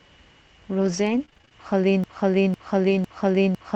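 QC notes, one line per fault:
0.81–1.52 s, repeated packet loss (robotic sound): packets went missing seven times in quick succession, each gap up to 23 ms, and every hole was patched by extending the preceding sound. About 140 ms is lost, roughly a fifth of the stretch, leaving choppy, robotic speech with pieces missing.
2.04 s to end, broken-record loop: a stall likely in the player, encoder or stream kept re-sending the last fragment it held. A 0.50 s piece of speech repeats exactly, back to back, until the clip ends, and the speech due in that time never arrives.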